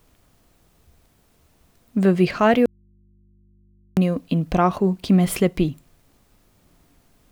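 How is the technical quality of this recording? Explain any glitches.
The recording has one clear glitch, an audio dropout to a faint residue, from 2.66 s to 3.97 s. For about 1.3 s the speech vanishes and only a low mains hum remains, roughly 40 dB below the normal level. The likely cause is a break in the signal feed while the input stayed open and live, picking up hum. The cut and the return are both abrupt, with no fade, and the gap is not silent, which is how it differs from a natural pause.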